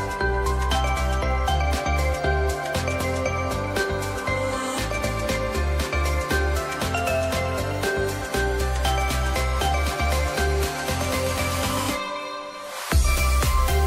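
No technical faults can be heard anywhere in the audio.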